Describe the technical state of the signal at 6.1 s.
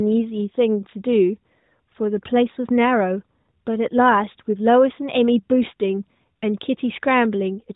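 At 6.1 s the speech is intact, with no dropout, click, distortion or other fault, and what is heard there is the narrowband sound of the AMR narrowband mobile codec.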